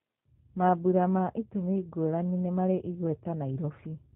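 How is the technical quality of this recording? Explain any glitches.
The recording is held back by plainly audible codec damage that runs through the whole clip rather than by isolated glitches.

G.729 codec, throughout: the speech has been rebuilt by a low-rate VoIP coder, here the G.729A variant, which models each short frame as a vocal tract filter driven by a pitch predictor and a handful of pulses, a texture that fits an 8 kbit/s coder. Everything above 4 kHz is gone, so the speech sounds muffled and lacks crisp sibilants, with a rough, slightly synthetic buzz in its tone.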